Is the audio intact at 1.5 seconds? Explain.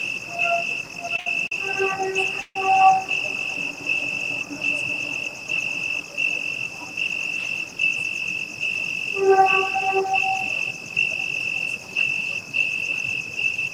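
No. A short stall from a late packet runs from 1.47 to 1.52 s. The receiver stretched the last sound for about 40 ms until the packet arrived, so nothing is lost, but it hangs with a faint buzz or dip. A noise suppressor applied to these sounds is also active here, treating held tones and tails as noise and pulling them down by several decibels, so the sound pumps, flutters or thins.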